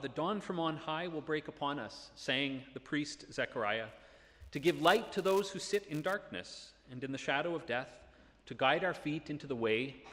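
From about 3.89 s to 6.15 s there's a buzz sitting on the sound, and it's a classic case of the filter restarted on every block. The filter drops its memory at each block boundary and starts again from silence, so every block opens with a tiny transient. Those clicks repeat 200 times a second, which points to blocks about 5 ms long, and together they fuse into a steady 200 Hz buzz that gets louder and quieter along with the signal.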